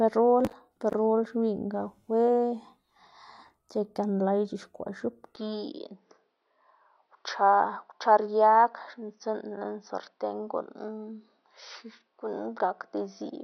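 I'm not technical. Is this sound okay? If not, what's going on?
No. From about 5.36 seconds until the end, the speech suddenly sounds duller and more muffled, as if heard through a cheaper microphone. Nothing above about 6 kHz comes through, so the crisp upper detail is gone, and a faint new background noise appears. The volume stays the same and there is no gap at the change. The likely cause is an input switched to a poorer device partway through the recording, such as a different microphone or headset.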